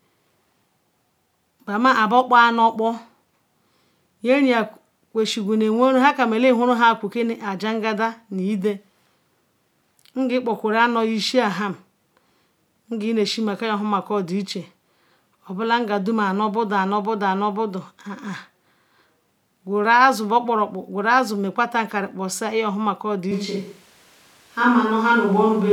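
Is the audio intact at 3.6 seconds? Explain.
Yes, at 3.6 seconds the speech plays through cleanly, with no dropout, click, distortion or other fault.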